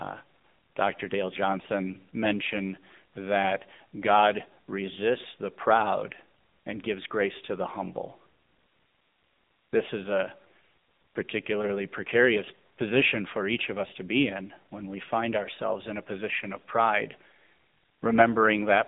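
Speech runs through the AMR narrowband mobile codec for the whole clip. The audio is held to a phone line band of about 200 Hz to 3.7 kHz, with nothing above 3.8 kHz. The damage is plainly audible as a buzzy, synthetic voice, the sound of a vocal-tract model rebuilding speech from sparse pulses. The degree of roughness fits a mid-low mode near 8 kbps. A plain band-limited landline would sound narrow but clean, so that buzz is what identifies the mobile codec.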